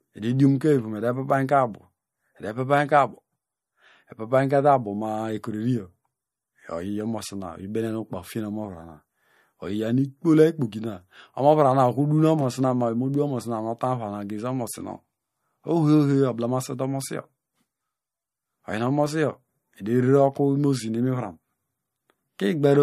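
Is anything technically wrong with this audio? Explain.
Yes. Throughout the speech there is plainly audible damage that points to MP3 compression as the likely cause. Nothing is present above 14.5 kHz, which fits a hard treble cut-off from an encoder short of bits, consistent with a low rate around 45 kbps. Within the remaining band, weak frequency components drop in and out between frames, giving a watery, swirling texture, metallic chirps on s sounds, and smeared consonant attacks.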